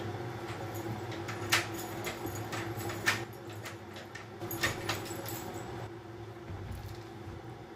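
At 3.24 s the level falls abruptly by about 6 dB and stays down until 4.41 s. From 5.87 s the same drop returns and lasts to the end. The likely cause is one channel dropping out: with one side of the stereo pair gone, the mono sum keeps only half the shared signal, and anything that lived only in that channel vanishes. On a waveform the envelope steps down sharply at those edges. A spectrogram shows a uniform darkening across all frequencies.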